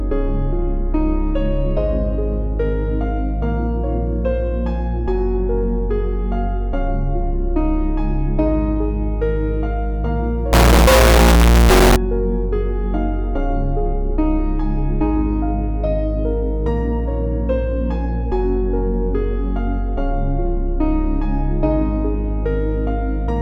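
From 10.53 to 11.96 s the audio turns into a very loud, harsh, near-square signal at an almost fixed, high level, with background noise as loud as the main sound. The likely cause is float read as integer: 32-bit float samples taken as 32-bit integers. The waveform shows a flat-topped block, and the spectrogram shows dense broadband energy.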